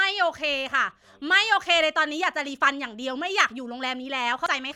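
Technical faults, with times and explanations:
4.46 s, damaged data in a compressed stream: a very short blip occurs near the end of the clip, lasting only a few milliseconds. Part of the compressed bitstream at this point is corrupt, so the decoder misreads the affected frame and loses frame sync. It then resynchronises at the next valid frame header, which is why the disturbance is so brief.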